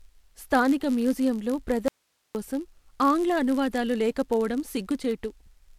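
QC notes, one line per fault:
Throughout: block size mismatch (padded). A steady buzz near 99.6 Hz sits under the speech because each block arriving at the next stage ends in a sliver of zeros. Those inserted gaps stretch the audio to 0.996 of its normal speed, and the roughly 10 ms repeat fits blocks of about that length. A waveform zoomed in shows tiny flat notches every 10 ms. A spectrogram shows faint vertical striations and harmonics spaced about 100 Hz apart.
1.88 to 2.35 s: audio dropout to a faint residue. The speech cuts off abruptly for about 468 ms and returns just as suddenly. In the gap only hiss remains, about 50 dB below the signal, which suggests the signal was likely lost upstream while the downstream path stayed live. The waveform collapses to a thin noise band with hard edges at both ends. On a spectrogram it appears as a sharp-sided dark block with a faint broadband haze rather than a fade.
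5.46 to 5.48 s: lost LE Audio frames. For 20 ms, which fits two 10 ms LC3 frames, the decoder reuses the last spectrum with randomized signs. The speech turns briefly into a grainy, noisy smear instead of clean tone. The LC3 coding itself likely adds only a light breathy edge elsewhere. On a spectrogram, the harmonic lines break into diffuse speckle for a couple of frames. The waveform loses its periodic shape there and looks noise-like at similar level.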